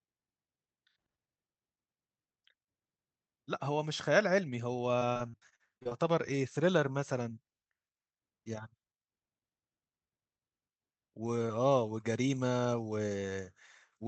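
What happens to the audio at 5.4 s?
Choppy, robotic speech with pieces missing, from 4.99 to 5.93 s: repeated packet loss, with around ten gaps, the longest 42 ms, patched by stretching the preceding sound.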